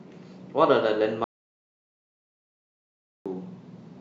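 At 1.24 s the speech cuts off abruptly and does not return until 3.26 s, an audio dropout to silence lasting about 2.02 s. The gap holds silence, with no room tone or noise floor, so the input signal was likely lost while recording continued. On a waveform the trace collapses to a flat line with hard edges at both ends, and a spectrogram shows a completely blank vertical band across every frequency.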